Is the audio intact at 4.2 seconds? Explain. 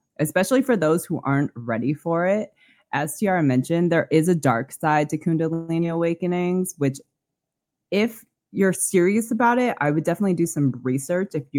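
Yes, the speech at 4.2 seconds comes through intact, with no dropout, distortion or other technical fault at that point.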